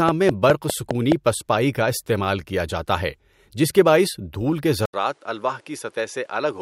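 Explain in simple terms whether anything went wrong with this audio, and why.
Two things went wrong in this speech recording.

From 0.09 to 1.13 s there is a train of clicks, most likely caused by electrical interference or a faulty connection. Something kept injecting a short pulse into the signal at a steady pace of about five per second, around seven in all. You hear it as an even ticking laid over the start of the recording, with each click standing out sharply above the speech.

At 4.86 s the input switched to a poorer device. The most likely explanation is that the system changed microphones partway through, perhaps dropping to a headset or a built-in mic. Right at the changeover there is a brief gap of about 80 ms. After it, until the end at 6.62 s, the sound is slightly quieter and a little duller, because nothing above about 11.4 kHz gets through. A faint new background hiss also appears beneath the speech.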